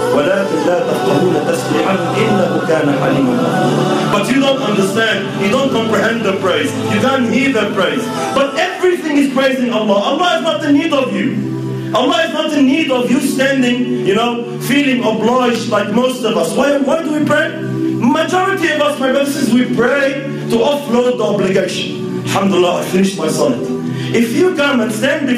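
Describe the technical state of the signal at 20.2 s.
At 20.2 s, as throughout the clip, there is gain pumping. The input gain is likely set far too high, so a fast limiter or compressor clamps down on each loud sound and lets go in the quieter gaps. The level swings by roughly 10 dB as a result, and the dynamics sound squashed, with loud and soft parts pressed close together.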